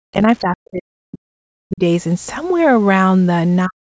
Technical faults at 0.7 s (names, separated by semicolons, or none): speech suppressed in double talk